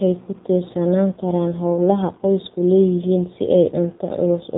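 From start to finish the speech sounds buzzy, thin and synthetic, with nothing above 3.8 kHz. This is the AMR narrowband mobile codec rebuilding the voice from a coarse vocal-tract model and a few pulses per frame, with plainly audible damage that points to a low rate near 7.4 kbps.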